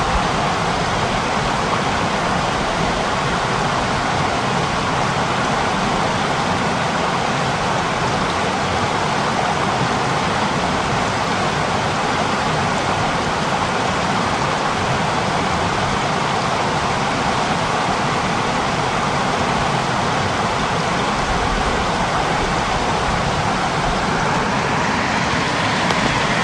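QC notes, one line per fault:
11.24 s, overlap between stream segments. A tiny skip in the everyday sound. About 14 ms of audio is missing here. Two adjoining stream segments carry time stamps that overlap. The player treats the overlap as repeated material and discards it, but that audio was never actually doubled. The waveform then jumps straight from one point to a later one. That sudden discontinuity is what produces the skip. It happens once in this clip.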